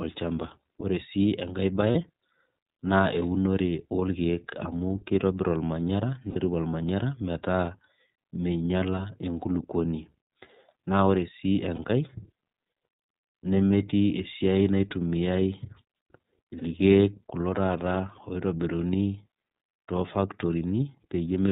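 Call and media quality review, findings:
iLBC codec, whole clip: band-limited speech, nothing above 4 kHz, plainly audible rough, synthetic texture. Frame-independent excitation coding, consistent with 30 ms mode at 13.33 kbps. Unlike AMR or G.729, no smearing or lingering damage carries across frame boundaries.

Lost iLBC frames at 1.92–1.96 s, 6.29–6.37 s, 11.76–11.79 s, 13.69 s, 16.59–16.63 s: brief held, buzzy vowel from decoder repeating the last pitch cycle with noise. The 6.29 s gap is longest, about 60 ms. Voice recovers at once, unlike dropouts that leave silence or distortion trailing afterwards.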